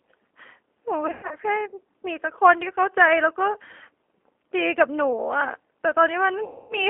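A speech recording carried over a G.729 phone link throughout. The sound is confined to roughly 300 Hz to 3.4 kHz, with nothing above. The damage is plainly audible. The voice comes out slightly rough and synthetic, which fits an 8 kbit/s codec that rebuilds each short frame from a filter shape, a pitch estimate and a few pulses. Fine detail is lost in that rebuild. VoIP packet loss concealed by the speech codec strikes twice. From 1.07 to 1.36 s, about 180 ms of audio is missing, scattered over 240 ms, with the longest gap 120 ms. From 6.44 to 6.78 s, about 260 ms is missing. The pattern fits 20 ms packets dropping. In each gap the decoder stretches its last pitch and filter into a sound that fades. The voice then stays weak and smeared briefly after real packets return, because each frame builds on the previous one.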